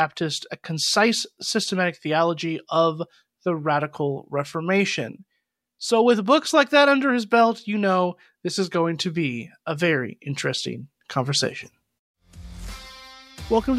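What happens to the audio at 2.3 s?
Nothing goes wrong at 2.3 s; the audio there plays through intact, with no dropout, click, glitch or other fault.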